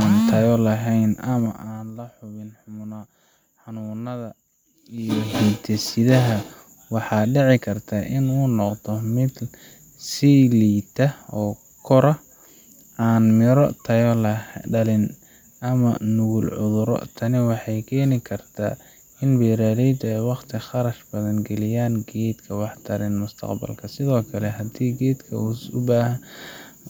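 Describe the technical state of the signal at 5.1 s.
At 5.1 s the signal is in the middle of zipper noise, running from 4.91 to 5.39 s. A level change of around 15 dB is applied in unsmoothed 2 dB steps, about twenty per second, and each jump clicks, producing a rapid ticking over the speech.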